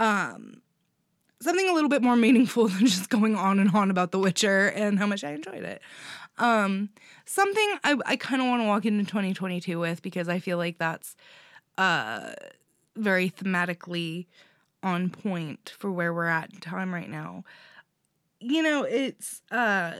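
Nothing technically wrong turns up anywhere in this stretch of speech, so there's nothing here to flag.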